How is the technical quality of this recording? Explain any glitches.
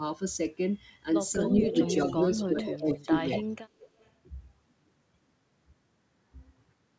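The recording has two linked problems around the middle, where both ends of the call appear to overlap.

Speech suppressed in double talk, between 1.35 and 3.45 s: the talker's level drops in pieces, about 0.7 s in total, by up to about 15 dB. The likely cause is an echo canceller that could not tell the near talker from the loudspeaker's echo while both were active, so it turned everything down. It sounds like the voice ducking or breaking up. A waveform shows the envelope pinched into sudden troughs, and a spectrogram shows the harmonics fading or gapping across those stretches.

Echo leak, from 1.44 to 2.93 s, briefly at 3.31 to 3.39 s, and faintly from 3.79 to 4.07 s: a delayed copy of the voice trails the original by about 233 ms. It sits about 10 dB below the speech in the first two spans and about 30 dB below in the last. It is likely residual loudspeaker pickup that the far end's canceller failed to remove and sent back. 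On a spectrogram it appears as a fainter, time-shifted duplicate of the speech harmonic pattern, offset by roughly a quarter second.

The call path cuts everything above 8 kHz, which fits a 64 kbps G.722 wideband codec.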